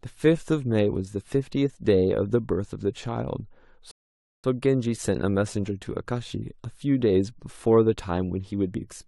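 This speech clip cuts to silence at 3.91 s and resumes unchanged at 4.44 s, a rebuffering stall that adds about half a second while playback waits for more data.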